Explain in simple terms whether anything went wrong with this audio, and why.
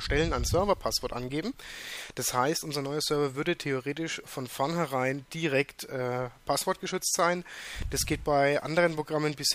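Something did go wrong: there's computer activity noise running through the whole clip, from start to finish. It's a buzzy, chirpy texture pulsing around a thousand times a second, sitting well below the main sound. It happens because the processor, graphics card or mouse change their power draw, which wobbles the ground that the audio circuit shares with them. So the noise follows what the computer is doing, not what the audio is doing.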